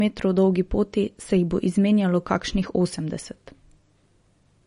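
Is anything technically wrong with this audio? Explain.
Yes, there's one problem throughout the speech: nothing above about 10.6 kHz, plus a watery, swirly texture on sibilants, which sounds like likely MP3 compression at a starved bitrate near 40 kbps, zeroing weak frequency lines.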